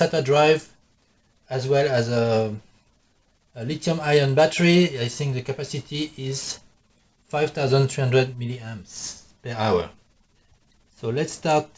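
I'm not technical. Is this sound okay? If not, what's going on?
Yes, the sound is okay: it has simply been carried over an ordinary internet call link, so nothing above about 8 kHz comes through, which keeps the very top of the sound trimmed without anything going wrong.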